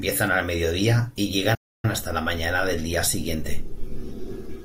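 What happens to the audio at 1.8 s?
At 1.8 s the speech sits inside a playback stall running from 1.54 to 1.85 s, about 290 ms of dead silence. The player likely ran dry of data or was blocked. The waveform drops flat, and the spectrogram shows a clean blank vertical band.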